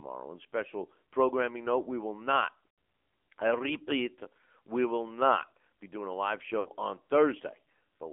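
The speech sits in a narrow telephone band, roughly 250 Hz to 3.5 kHz, from start to finish. That is the AMR narrowband mobile codec at work. It samples at 8 kHz and rebuilds the voice from a vocal tract model fed by a few pulses. Here the damage is plainly audible. Voiced sounds turn buzzy and synthetic, and consonants lose their edge. The coarseness points to a low bitrate mode, which fits about 7.4 kbps.

From 2.68 to 2.78 s, lost AMR speech frames cause a 100 ms gap, about five 20 ms frames. The decoder repeats the last good pitch and vocal tract settings while the gain falls. The sound smears, drags out, then fades toward silence before recovering roughly. A shorter loss follows from 6.60 to 6.69 s. It lasts 60 ms, about three frames. It gives a brief warble and dip rather than a full fade.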